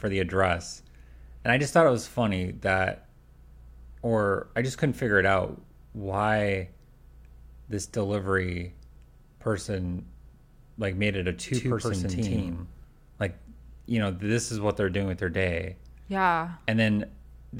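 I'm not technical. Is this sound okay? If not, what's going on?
No, there's one problem. Right after "like made it a", from about 11.54 to 12.84 seconds, you hear a doubled audio track: the speech plays twice, with a second copy running roughly 150 milliseconds behind and just as loud as the first. It sounds like a hard, flat stutter rather than a natural echo, and it switches on and off abruptly. The likely cause is the sound being picked up a second time through a slower route.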